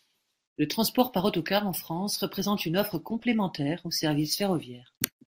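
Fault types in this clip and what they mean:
DAB burbling: under weak reception, bit errors slip past error correction into the MP2 data, so corrupted samples add short noise blips in single sub-bands and corrupted scale factors make sub-bands jump in level for up to a frame. Here a brief burst of burbling, across 7 frames, overlays the speech from 3.14 to 3.25 s.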